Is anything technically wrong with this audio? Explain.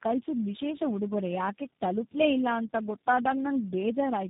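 Yes. Tandem speech coding runs throughout. It sounds like four speech codecs in a row, each recoding the last one's damage. The result is rough, muffled and warbly, with nothing above 3.8 kHz.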